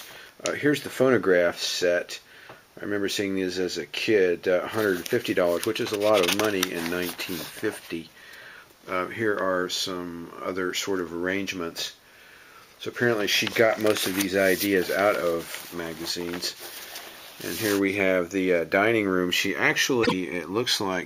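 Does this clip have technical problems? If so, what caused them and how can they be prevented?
Yes. Near the end of the clip, between 20.03 and 20.13 s, two neighbouring blocks of frames reached the decoder in the wrong order, an instance of frames out of order. Each swapped block lasts about 26.1 ms, which fits single frames being exchanged. The decoder played them as they arrived, so this short stretch runs with its halves reversed. It comes across as a brief garbled flutter, and no time is lost overall. To prevent it, buffer incoming packets and reorder them by sequence number or timestamp before decoding.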